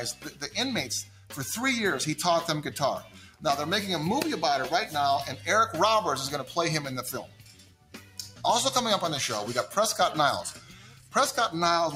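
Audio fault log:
throughout: noise suppressor applied to music or sounds. A speech-oriented suppressor stayed active and keeps treating sustained tones, ambience and reverb as noise. Its gain swings by around 10 dB, so held parts and tails sink while attacks pass, leaving the sound pumping and thinned.
0.13–0.50 s, 1.03–1.35 s, 3.00–3.44 s, 7.23–8.44 s, 10.51–11.15 s: sound cut by the noise suppressor. Each time the suppressor misread steady or decaying material as noise and clamped it, by about 10 to 11 dB at the deepest. Sustains dip and decays end early, over the longest stretch near 7.2 to 8.4 s.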